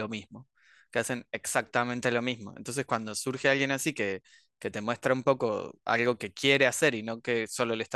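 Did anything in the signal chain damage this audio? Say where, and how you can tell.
No, nothing in this speech recording points to damage from any stage of the signal chain. No stage shows a mark anywhere in the recording.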